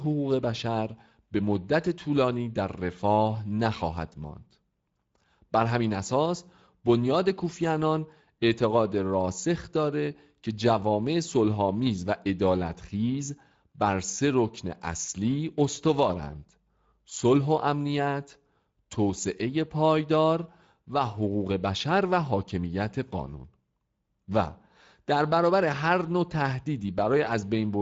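From start to finish the speech carries plainly audible Speex codec damage. The CELP coder has too few bits to model the excitation properly, so the speech sounds noisy and hoarse. The sound points to a Speex mode around 16.8 kbps. On a spectrogram, energy stops at a flat ceiling at 7.6 kHz, and harmonic structure below it looks smeared and speckled rather than cleanly striated.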